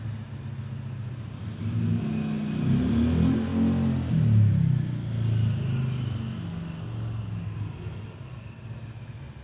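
Nothing in this one stands out as a technical fault; it's just the everyday sound, running along with no glitches to point to.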